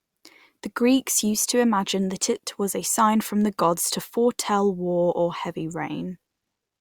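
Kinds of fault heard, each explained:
No faults can be heard anywhere in the speech recording: the signal stays continuous, with no dropouts, distortion, noise bursts or timing disturbances.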